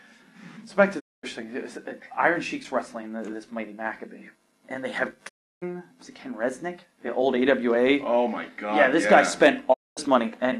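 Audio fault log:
0.99–1.25 s, 5.28–5.64 s and 9.72–9.99 s, digital broadcast dropout: the sound fades out over about 20 ms and goes silent for roughly a quarter second, a third of a second, then a quarter second again before picking up further along. That's the receiver muting when frames fail or the signal drops. The gaps of 224 ms and 320 ms fit runs of seven and ten 32 ms frames. Whatever was sent during each hole is gone.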